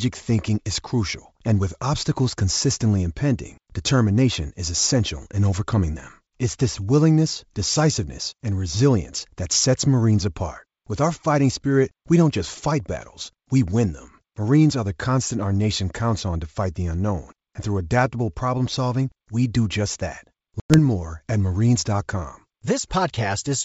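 A speech recording with a sudden hard-edged gap at 20.60 s, where the sound drops to silence and, when it resumes, it comes back with brief roughness before settling by about 20.79 s. This is packet loss on an ADPCM call: about 100 ms of audio, a handful of packets, was replaced by silence, and the decoder's adaptive predictor and step size drifted from the sender's until they resynchronised. The G.722 wideband coding carrying the call shows faint codec damage at most.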